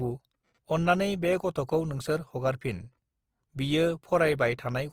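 The damage runs through the whole speech clip. Opus compression is the likely cause. The sound is rough and grainy from start to finish. Voiced parts lose their clean tonal edge and take on a noisy, sandy texture. The top end is still present, so the sound is not muffled. The encoder seems to be in its music mode, which fills starved bands with folded or noise-like content instead of leaving gaps. The plainly audible roughness fits a low rate of around 24 kbps.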